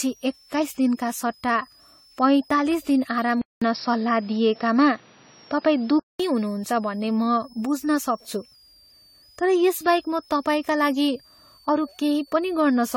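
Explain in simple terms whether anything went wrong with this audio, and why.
Three problems can be heard in this speech recording.

A switching supply whistle runs through the whole clip. It's a thin, high whistle around 5 kHz that wanders between roughly 4.2 and 5.7 kHz, sitting well below the voice but always present. It comes from a power adapter or similar supply whose internal switching has dropped into the audible range, so its electrical buzz leaks into the recording as a tone.

Generation loss is also present from start to finish. The voice sounds swirly, smeared and hollow, and the starts of sounds are softened, more than a single round of compression would cause. The likely cause is the file being compressed, decoded and compressed again about seven times with the same lossy AAC format, each pass adding its own small damage.

Between 3.42 and 6.2 seconds, the sound drops out for about a fifth of a second, then returns duller and a little changed in level, with a faint layer of extra background noise. 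Everything above about 5.6 kHz is missing, which takes away the crispness. After 6.2 seconds the fuller sound returns. This is most likely an input switched to a poorer device, such as a headset or a lower-grade microphone, for those few seconds.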